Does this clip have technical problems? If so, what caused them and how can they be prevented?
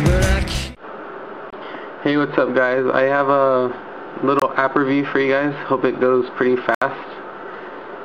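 Yes. The sound drops to silence three times: at 1.50 to 1.53 s and 4.40 to 4.42 s for about 23 ms each, and at 6.75 to 6.82 s for about 70 ms. The lengths fit one lost packet, then three in a row. This is likely a Bluetooth dropout, where packets miss their delivery deadline and are discarded. Unlike a buffer underrun, the audio resumes further along, as though it had kept playing. Keeping the headphones near the source and away from 2.4 GHz interference prevents it.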